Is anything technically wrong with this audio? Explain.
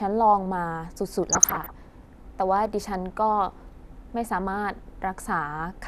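Yes. From 1.29 to 1.85 s the speech has DAB burbling: residual bit errors, around half a percent, corrupt MP2 samples and scale factors, so sub-bands get short blips of noise and jump in level, producing a burbling sound.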